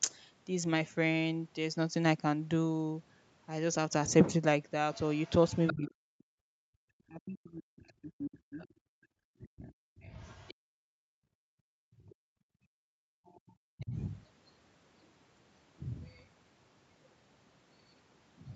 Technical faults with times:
4.93-5.91 other side's voice leaking through
5.73-10.06 speech suppressed in double talk
7.88-10.54 other side's voice leaking through
8.90-13.25 background gated by the echo canceller
11.63-12.22 speech suppressed in double talk
12.09-13.86 other side's voice leaking through
13.75-13.91 speech suppressed in double talk

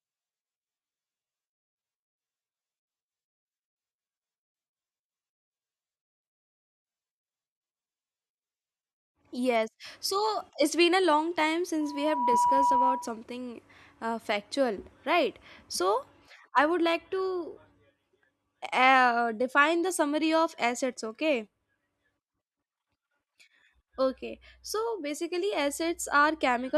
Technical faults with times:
11.80-13.22 loudspeaker feedback squeal

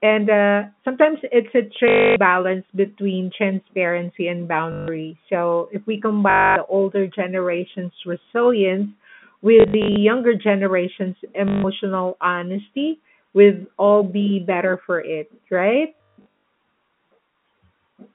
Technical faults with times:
1.88-2.16 packet loss with last packet repeated
4.72-4.88 packet loss with last packet repeated
6.30-6.56 packet loss with last packet repeated
9.60-9.96 packet loss with last packet repeated
11.48-11.64 packet loss with last packet repeated
15.97-16.26 packet loss with last packet repeated

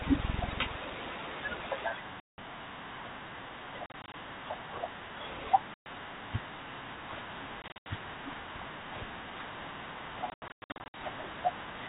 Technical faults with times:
2.20-2.39 packet loss on an ADPCM call
3.86-4.14 packet loss on an ADPCM call
5.74-5.87 packet loss on an ADPCM call
7.62-7.87 packet loss on an ADPCM call
10.30-10.95 packet loss on an ADPCM call

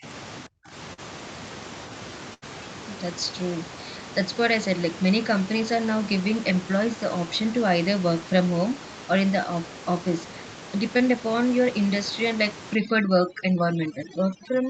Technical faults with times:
0.00-0.05 speech suppressed in double talk
0.46-0.75 speech suppressed in double talk
0.93-1.00 short concealed packet loss
2.34-2.44 burst of packet loss
10.98-11.01 short concealed packet loss
12.75-14.70 overdone noise removal

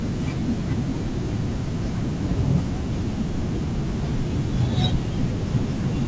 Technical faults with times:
none

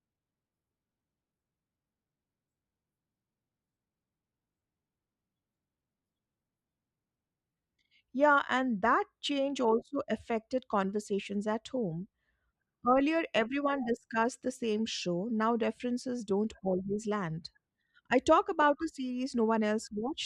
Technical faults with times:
none

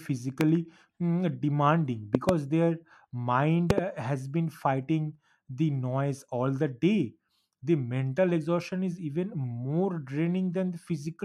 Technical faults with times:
0.41-0.43 loud pop
2.15-2.31 loud pop
3.70-3.80 loud pop

